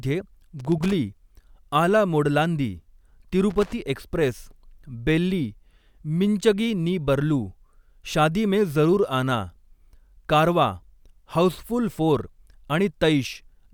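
At 0.60 to 0.93 s and again at 3.50 to 3.73 s the speech is broken by loose connector crackle: a worn or dirty contact keeps making and losing connection as it shifts, chopping the signal. Each burst is ragged and irregular, a scratchy rattle rather than the evenly spaced, identical ticks of a digital dropout or buffer fault, and it stops when the contact settles.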